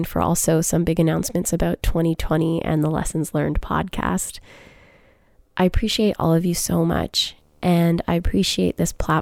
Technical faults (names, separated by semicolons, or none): video or display buzz